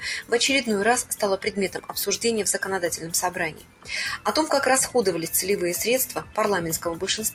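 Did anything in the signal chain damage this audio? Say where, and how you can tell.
Yes. The noise suppressor was applied to music or sounds throughout the clip. This is damage at the call-processing stage. A suppressor tuned for speech treats sustained tones, ambience and decaying tails as noise. Its gain therefore keeps swinging by around 10 dB. Onsets pass through, but held material sinks and recovers, so the whole clip pumps and thins instead of keeping a stable level and body.

The deepest moments come where sound was cut by the noise suppressor: 1.73 to 1.93 s (about 9 dB down), 3.51 to 3.89 s (about 11 dB, the longest, about 0.4 s), and 6.2 to 6.37 s (about 9 dB). In each span the steady or fading sound sinks in level or its decay is cut short. This happens because the suppressor classified that sustained energy as noise and attenuated it harder than its surroundings.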